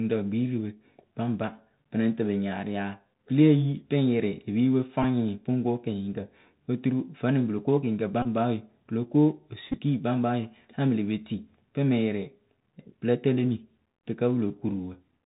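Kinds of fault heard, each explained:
Bluetooth CVSD headset codec: The speech passes through a narrowband headset codec that sends a single up-or-down bit per sample, consistent with a 64 kbit/s CVSD link, with an adapting step size. The damage is plainly audible throughout. On a spectrogram everything stops at a hard ceiling near 4 kHz. Sibilants turn scratchy, and a fine granular hiss lies under the speech. The waveform shows slope-limited, staircase-like edges where loud high content outruns the step.
Bluetooth headset packet repeated: When voice packets between headset and phone were lost, the chip decoded the previous packet's bits again. At 5.03 s there is a short buzz near 267 Hz covering about 11 ms, which points to roughly three repeated packets. Longer runs at 8.22 to 8.27 s and 9.72 to 9.78 s produce a brief buzz near 267 Hz. In the waveform these appear as identical segments repeating every 3.75 ms, and on a spectrogram as evenly spaced vertical striations.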